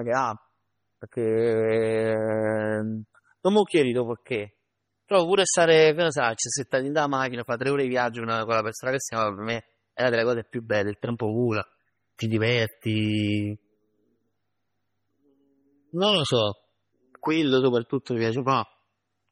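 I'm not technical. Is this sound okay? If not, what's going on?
No, the speech sounds watery and swirly from start to finish, likely from heavy MP3 compression squeezing it hard, with nothing above about 16 kHz surviving.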